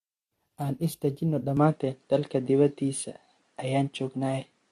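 From the first moment the speech has a swirly, hollow smear, with consonant attacks blurred and nothing above 14.1 kHz. That is generation loss, likely from AAC-LC at 64 kbit/s being re-encoded around seven times. A single encode at that rate would sound cleaner and less smeared.

At 1.57 s, with no gap, the input switched to a poorer device, likely a different microphone or headset profile. The band narrows to nothing above 10.5 kHz, the level shifts by about 5 dB, and a new noise floor appears about 45 dB down. A codec fault would not bring this sudden step in tone and background.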